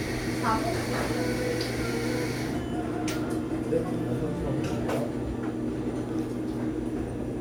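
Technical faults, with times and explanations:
No technical faults can be heard in this clip. Nothing in the sound points to a problem in how it was captured, processed or played back.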